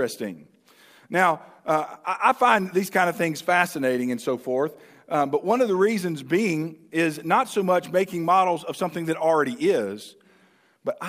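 No technical faults can be heard anywhere in the recording. Nothing in the audio breaks, drops out or shifts at any point.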